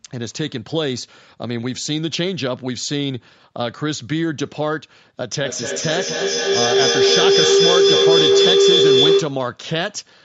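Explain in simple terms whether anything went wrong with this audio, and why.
Feedback howl, 5.41 to 9.51 s: two call devices re-amplify each other into a tone near 400 Hz, pulsing about five times a second.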